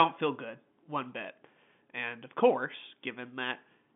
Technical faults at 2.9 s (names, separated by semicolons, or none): none